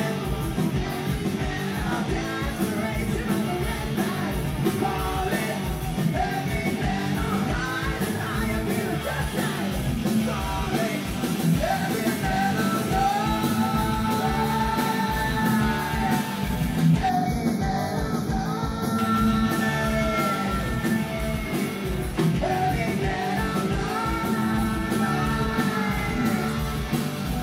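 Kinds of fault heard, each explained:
Channel delay (comb filtering): From 17.09 to 18.99 s, one channel arrives a fraction of a millisecond late, around 0.2 ms, and the two are folded to mono, so content common to both cancels at evenly spaced frequencies. The sound turns hollow and phasey, with the first notch around 3 kHz. On a spectrogram this shows as dark horizontal stripes at fixed, regularly spaced frequencies across that span. The waveform itself gives little visible sign.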